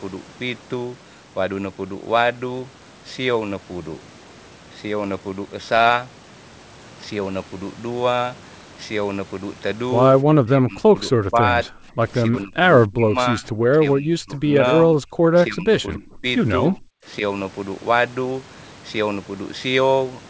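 From 10.24 to 11.48 s, then at 11.69–12.0, 12.28–12.64, 12.87–13.18, 13.34–14.62, 14.85–15.28, 15.48–16.25 and 16.69–17.07 s, the speech repeatedly ducks or breaks into fragments, dropping by about 20 to 35 dB. This is most likely speech suppressed in double talk, where an echo canceller mistook the talker for loudspeaker echo and attenuated both. On the waveform it appears as sudden notches carved into the envelope. On a spectrogram it shows as faded or blank vertical bands through the speech harmonics, all beneath the 8 kHz ceiling set by the G.722 call path.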